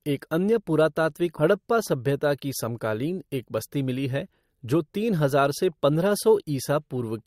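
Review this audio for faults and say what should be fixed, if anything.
At 1.37 to 1.42 s, just after "एक अन्य पुरातात्विक", the speech jumps abruptly forward with a short blip, likely a stream segment skipped when one chunk failed to load and playback resumed at the next. A spectrogram would show a thin vertical broadband stripe and harmonics that break off mid-contour, and a waveform would show a sudden discontinuity. Preventing this means retrying or buffering failed segments before playback advances past them.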